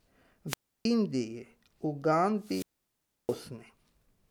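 Speech with two wireless microphone squelch dropouts, where the analogue FM radio link fades until the receiver's squelch shuts the output off. The first runs from 0.47 to 0.85 s with a mute of about 315 ms, the second from 2.39 to 3.44 s with a mute of about 668 ms. Each begins with a rise of hiss, falls into near silence, then the voice returns. On a spectrogram, broadband noise gives way to an empty band; on the waveform, a flat gap.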